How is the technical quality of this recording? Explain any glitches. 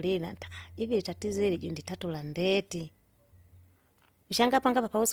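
The technical quality is limited by plainly audible lossy coding across the whole recording.

Opus compression, likely in its CELT music mode, runs throughout. Bands short of bits are filled with folded or noise-like content, so the speech sounds grainy and rough rather than swirly. The damage fits a low bitrate near 24 kbps, while the bandwidth still reaches about 20.2 kHz.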